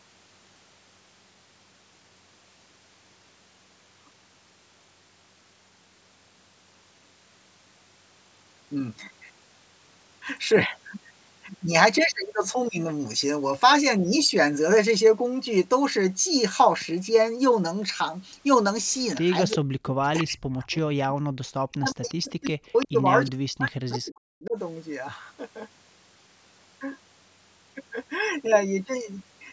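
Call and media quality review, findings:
Speech suppressed in double talk: sound dips at 19.20–19.26 s (brief, about 10 dB), then dips deeply at 19.56–23.06 s and 23.28–24.57 s, down about 40 dB. Likely the echo canceller ducking near talker and echo together while the far side talks over.

Echo leak: faint delayed copies at 19.50–19.57, 21.72–21.77, 22.45–22.50, 22.66–22.86 and 23.65–23.71 s, lagging 359 ms, about 15–25 dB under the speech. Likely loudspeaker pickup the loudspeaker side's echo canceller didn't fully remove.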